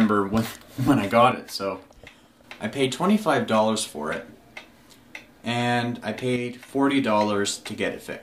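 At 1.32 s the sound abruptly drops by about 6 dB and stays quieter until 2.44 s, then does so again from 6.36 to 6.69 s. Each dip is likely one channel dropping out, leaving the mono sum with only one side.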